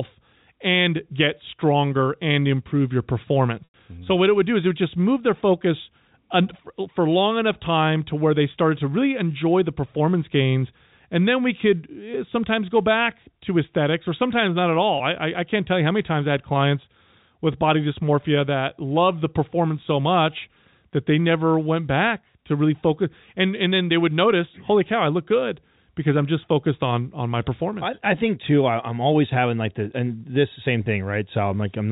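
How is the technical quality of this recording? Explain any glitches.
Three brief dropouts interrupt the speech, heard as moments where the sound momentarily sticks or buzzes before carrying on. The band-limited telephone character, with nothing above 4 kHz, fits G.711 coding.

Packet loss with pitch repetition occurs at 3.64 to 3.74 s, 14.98 to 15.00 s (after "or sometimes not at", before "I I I can't"), and 30.84 to 30.86 s (after "the and this same"). Each time, the receiver filled the gap by repeating the last pitch period, giving a held, buzzy tone. The 100 ms gap points to about five lost packets and lasts long enough to fade toward silence before speech cross-fades back in. The two 20 ms gaps each fit a single lost packet and sound like a slightly held, buzzy note.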